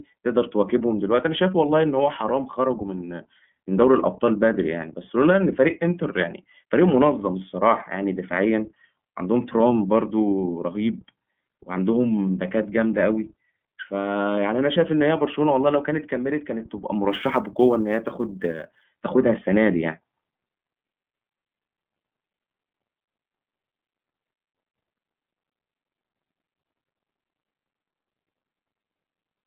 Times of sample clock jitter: 17.10-18.84

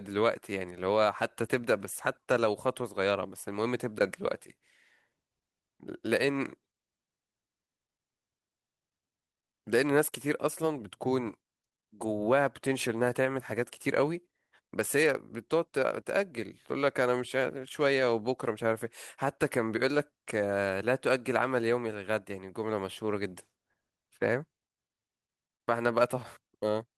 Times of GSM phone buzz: none

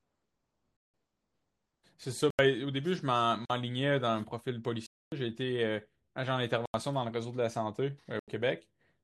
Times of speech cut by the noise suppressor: none

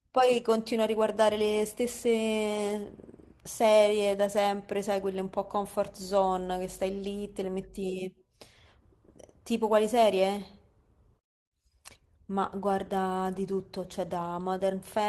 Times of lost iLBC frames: none

